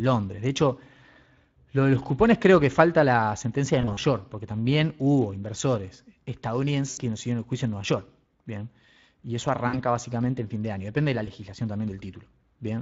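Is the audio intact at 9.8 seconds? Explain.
No. Speex codec damage runs throughout, which fits a bitrate near 20 kbps: hoarse, noisy speech, with smeared, noise-like texture visible above 8 kHz on a spectrogram.

VoIP packet loss concealed by the speech codec spans 9.67 to 9.79 s. The decoder extends the last pitch and filter into a fading sound, visible as a tapering waveform whose weakness lingers just past 9.8 s.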